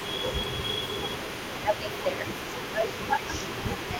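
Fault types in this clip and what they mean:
Echo leak: A faint, delayed second copy of the speech trails the main voice for the whole clip, arriving about 437 ms late and sitting roughly 15 dB below it. The likely cause is a far-end loudspeaker whose sound reached its microphone and was not fully cancelled, so part of the outgoing speech was captured and sent back down the line.
Speech suppressed in double talk: The main voice ducks by around 10 dB at its deepest in four places, near 0.18 to 0.64 s, 1.63 to 2.26 s, 2.73 to 3.23 s and from 3.85 s to the end. This likely comes from an echo canceller that could not tell the local talker from the returning echo while both were active and turned everything down together.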